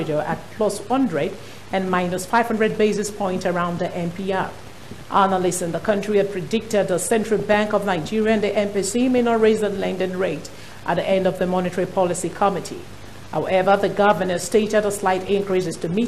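MP2 compression runs through the whole clip: the sound is dull and carries a gurgling, granular texture, likely from MPEG Layer II coding at a low rate, which fits an 80 kbps stream. Starved of bits, upper sub-bands drop out and flicker, while the remaining bands are coarsely quantised.

DAB burbling appears from 7.39 to 7.54 s and again from 9.11 to 9.18 s. A small fraction of bit errors slipped past error correction into the audio frames. Corrupted samples put short blips of noise into single sub-bands, and corrupted scale factors make individual sub-bands jump in level, producing brief bursts of burbling.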